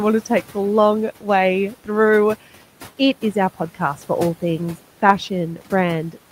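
From 1.71 to 1.89 s the speech briefly sounds swallowed and faint, dipping by about 10 dB for around a tenth of a second. This is speech cut by the noise suppressor: it mistook quiet speech for the room noise, which sits about 20 dB below speech, and turned it down.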